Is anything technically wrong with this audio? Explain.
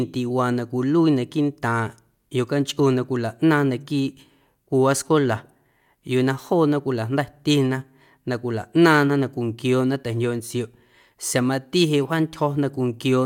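No, nothing technically wrong turns up in this speech recording.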